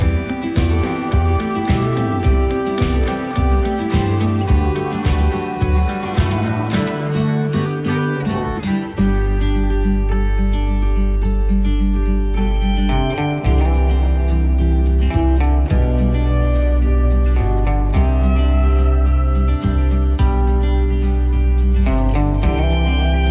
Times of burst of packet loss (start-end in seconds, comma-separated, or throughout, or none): none